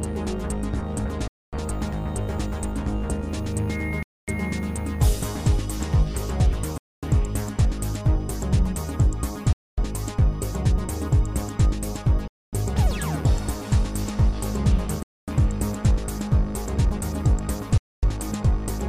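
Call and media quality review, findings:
Gap between chunks: hard-edged 250 ms silences at 1.28, 4.03, 6.78, 9.53, 12.28, 15.03 and 17.78 s, recurring every 2.75 s. Points to 2.5 s chunks joined with padding or a late chunk start in the player. Sound is interrupted, not lost.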